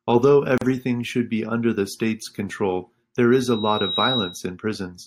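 At 0.58 s the speech drops out for about 37 ms, ending at 0.61 s. This is a gap at a join of encoded pieces: two separately encoded segments were spliced without removing the encoder's start-up delay and final-frame padding, so that silence stays in the stream. The edges are smeared by the codec, and the speech resumes exactly where it broke off rather than skipping ahead.

From 3.32 s to 4.51 s a loudspeaker feedback squeal appears. A single tone at 3.8 kHz rises out of the speech over roughly 0.7 s until it is about as loud as the speech itself, and it holds there until it stops at 4.51 s. The microphone was picking up a loudspeaker it was feeding, and at that frequency the loop gain exceeded unity, so the tone reinforced itself on each pass.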